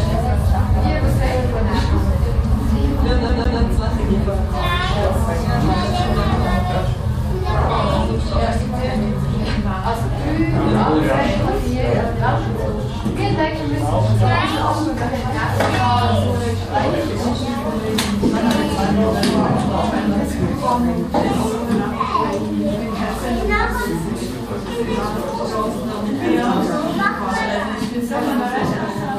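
A CD stuck on one turn, from 3.29 to 3.60 s: the laser jumps back a track, repeating a 154 ms slice twice with a brief mute at each jump.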